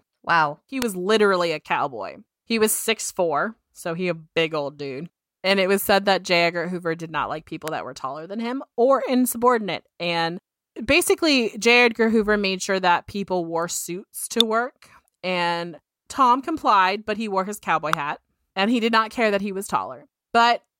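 Sharp snaps hit at 0.82, 7.68, 14.41 and 17.93 s. They sound like an electrical switching spike, likely a nearby switch arcing.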